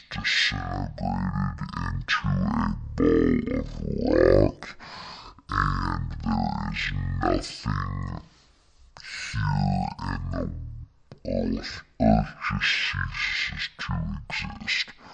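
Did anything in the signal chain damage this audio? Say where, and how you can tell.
Yes. A wrong sample rate at the playback stage affects the whole clip. The speech is a full octave low, about 12 semitones down, and runs at half speed, so syllables drag and the voice sounds deep and sluggish. Pitch and tempo have dropped together by the same factor of two, which means no resampling happened. The stored samples were clocked out at half their intended rate, which fits a 48 kHz recording played back at 24 kHz.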